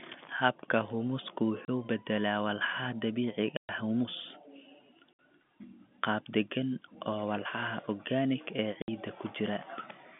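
Packet loss filled with silence cuts the speech four times: at 1.65 to 1.68 s, just before "u beddelaa"; at 3.57 to 3.69 s, a 120 ms gap; at 5.14 to 5.18 s; and at 8.82 to 8.88 s, right after "oo walxaha organic ee". Each hole is a multiple of 30 ms, pointing to 30 ms packets dropped in transit and replaced with silence. The hard-edged gaps break into the narrow telephone-band G.711 sound.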